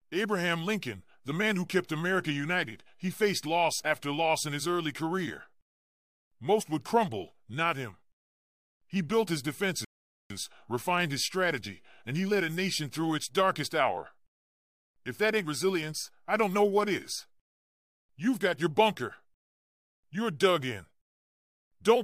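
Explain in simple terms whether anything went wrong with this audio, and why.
Something did go wrong: a rebuffering stall at 9.85 s. The speech cuts to silence and stays silent until 10.30 s, then picks up exactly where it stopped. The player ran out of downloaded audio and had to wait for more to arrive before it could continue. No speech is lost or skipped; the only effect is an extra 0.45 s of dead air inserted into the middle of the clip.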